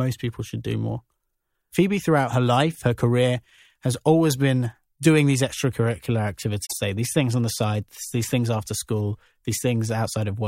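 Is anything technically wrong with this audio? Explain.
Yes. Between 6.65 and 6.73 s, a span of about 80 ms, the speech is broken by a short glitch, a chirp, squawk, click or brief hole that doesn't belong to the sound around it. This is damaged data in a compressed stream: a stretch of the encoded bytes there is corrupted, so the decoder misinterprets or discards those frames, loses its place in the bitstream and has to hunt for the next valid frame header before clean audio resumes.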